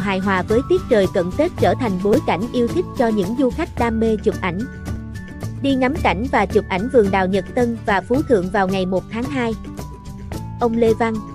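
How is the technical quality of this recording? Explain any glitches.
The recording has two brief playback glitches, both repeated buffers. At 2.14 s and 4.96 s, fresh audio arrived late, so the device replayed its last block of about 5 ms, twice at the first point and once at the second. The hard joins sound like tiny clicks or buzzes. No audio is lost.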